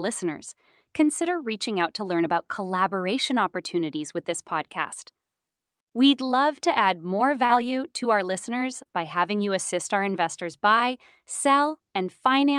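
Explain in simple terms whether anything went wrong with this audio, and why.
Two small glitches here, both short concealed packet loss, at about 7.45 s and 8.83 s. Bits of the call, roughly 40 ms and then 20 ms, arrived too late, so the receiver patched each gap by stretching the last sound, leaving a quick smear or wobble.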